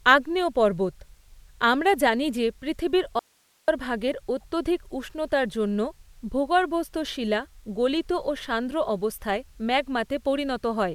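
At 3.19 s, right after "আমরা জানি যে পৃথিবীর", the speech cuts off abruptly in an audio dropout to a faint residue lasting until 3.68 s, about 0.49 s. The gap holds only hiss, roughly 40 dB below the speech, before the voice snaps back. The cause is likely a brief loss of the wanted signal while the downstream path stayed live. On a waveform this shows as a sudden collapse to a thin band. A spectrogram shows a hard-edged gap filled with faint broadband noise.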